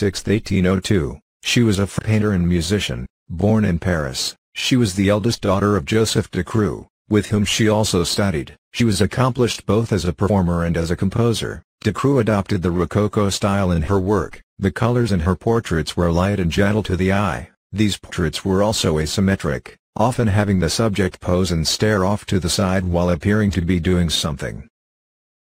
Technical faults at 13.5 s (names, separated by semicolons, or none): none